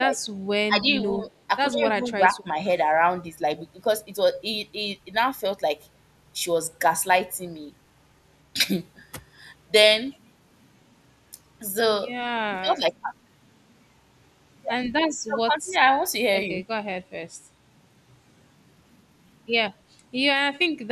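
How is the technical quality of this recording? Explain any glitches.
The speech repeatedly sinks in level for short stretches, at 0.0 to 0.18 s, 0.67 to 0.88 s, 1.71 to 2.47 s, 12.46 to 12.86 s and 15.26 to 15.74 s. The drops are slight at first and deepen to about 25 dB in the last two. This is likely speech suppressed in double talk: an echo canceller, unable to separate this talker from the far side's loudspeaker echo, turned both down.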